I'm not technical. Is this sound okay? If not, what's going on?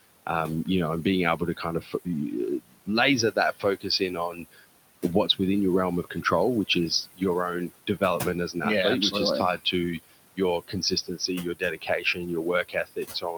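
No. All the way through, the background noise dips away between phrases and comes back under the talking. These are noise suppressor artifacts: a cleanup filter strongly turns down anything it judges to be steady background, and it keeps readjusting.

That same filter also causes speech cut by the noise suppressor. Bits of the talking get mistaken for noise and go faint or swallowed: scattered moments adding up to about a second and a half between 1.37 and 4.65 s, briefly after "your realm" (6.03 to 6.26 s), just after "which is" (7.06 to 7.22 s), just before "as an athlete" (7.69 to 8.21 s), and from 9.57 s to the end.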